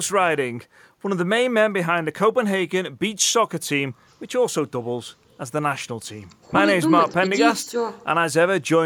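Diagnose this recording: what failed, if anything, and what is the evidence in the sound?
Nothing failed here: I can't hear a fault at any stage anywhere in this speech recording.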